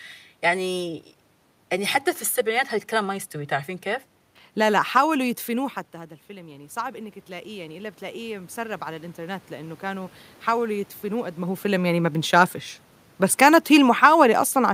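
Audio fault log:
5.92–10.22 s, automatic gain rising. Around 5.5 s the talker moved back, and the input level fell by about 13 dB. The automatic gain control heard this drop and raised its gain slowly, by about 9 dB over some four seconds. The speech swells back up gradually rather than at once. The room noise swells with it, because the gain lifts everything the microphone picks up, not the voice alone.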